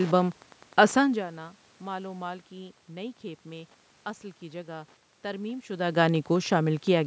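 From start to finish, a faint, steady ticking runs under the speech at roughly ten ticks a second, sitting far below the voice, around 30 dB down. This is Wi-Fi interference. A nearby Wi-Fi radio sends a beacon every 102.4 ms, and the audio circuit rectifies each burst into a click, so the ticks keep their fixed rhythm even as the voice shifts in level when the talker moves near 1 s and 5.5 s.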